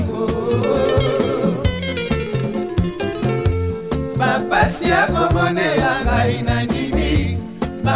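No technical faults can be heard anywhere in the audio, and the signal stays steady and intact throughout.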